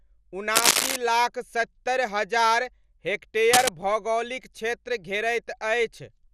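It's a short speech clip, and the whole thing has that dull, gurgly, grainy quality you get from MP2 compression. The top end sounds thin and unsteady, with upper bands seeming to drop in and out, and what's left is coarsely quantised. The damage is plainly audible, which fits a low rate somewhere around 80 kbps, where MPEG Layer II has too few bits to go round its sub-bands and starts switching the higher ones off. There are two bursts of scratchy, rustling noise, most likely cable scratch noise from a worn lead or connector being moved and its contact resistance jumping around. The first runs from 0.54 to 0.96 s, just before "लाख सत्तरि हजार", and it's a bit louder than the speech itself. The second is shorter, 3.53 to 3.69 s, and sits at roughly the same level as the speech. Both are dense, uneven crackle laid over the sound for a moment. Then at 4.57 to 4.59 s there's a brief light patch of watery blips, which is DAB burbling. 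A tiny number of bit errors got past the error correction into the MP2 data, so wrong samples put short blips of noise into single sub-bands. It's over in a flash, which fits a couple of corrupted frames at a very low error rate.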